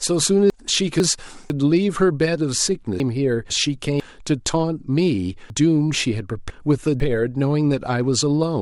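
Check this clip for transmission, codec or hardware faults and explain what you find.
Three chunks out of order appear in the speech. At 0.5–1.5 s and 3.0–4.0 s, a 500 ms chunk plays one slot late. At 5.5–7.0 s, one is two slots late. Each produces a jumbled stretch with three hard joins.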